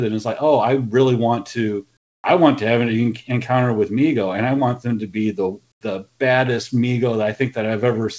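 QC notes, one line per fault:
1.97–2.24 s and 5.72–5.81 s, comfort noise in place of the background: the background, sitting about 46–47 dB below the loudest passages, is swapped for a smoother synthetic noise, about 4 dB quieter for 270 ms, then about 19 dB quieter for 90 ms. The likely cause is discontinuous transmission: the sender pauses when its activity detector finds nothing to send, and the receiver fills the gap with generated noise, band-limited to 8 kHz like the G.722-style call path.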